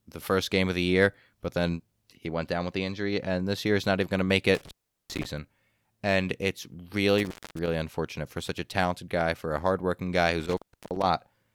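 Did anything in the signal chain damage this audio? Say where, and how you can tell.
Yes. The speech drops out three times, at 4.55–5.26 s, 7.18–7.68 s and 10.40–11.06 s, with crackle at each edge and faint hiss in the gaps of roughly 390, 240 and 340 ms. This is intermittent contact in the analogue wiring: a loose cable or plug briefly breaking the connection.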